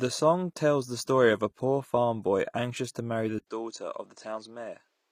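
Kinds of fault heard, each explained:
HE-AAC compression: The treble sounds bright but synthetic throughout, with s sounds coming out gritty and metallic because the upper harmonics don't line up with the lower ones. That points to spectral band replication rebuilding the top band, likely HE-AAC at a low bitrate of about 24 kbps.
Input switched to a poorer device: After "boy anxious to marry", at 3.39 s, an 80 ms gap is followed by duller speech with nothing above 8.8 kHz. The speech is a little quieter and sits over a faint new noise floor until the end. The recording input likely changed to a narrower-band microphone.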